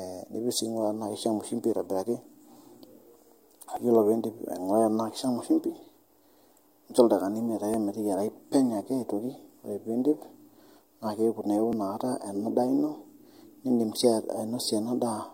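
At 3.77 s, 7.74 s and 11.73 s the speech skips, each time just before "iyolo piindip" and "ana daa ino" for the first and last. This is overlap between stream segments. Adjacent segments, spaced about 4 s apart, claimed the same stretch of time, and the trimmed overlap removed roughly 27, 42 and 39 ms of real audio. On a waveform the trace jumps abruptly. A spectrogram shows a thin vertical broadband line with the harmonics shifting across it.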